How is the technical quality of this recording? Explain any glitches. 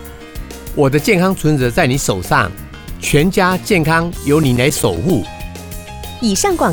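The recording has one fault, CD scratch ticks. From 4.04 to 5.36 s, eleven brief ticks repeat about eight times a second. A scratch defeats error correction once per disc turn. The player patches each gap, leaving clicks of a few milliseconds.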